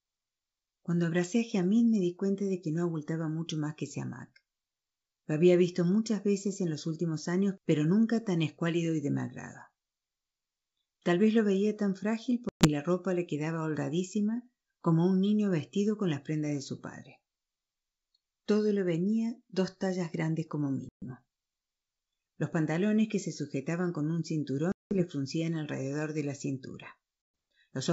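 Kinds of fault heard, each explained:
Packet loss on an ADPCM call: at 12.49, 20.89, 24.72 and 27.22 s, abrupt 120–190 ms silences, then the resynchronising decoder briefly distorts the returning speech.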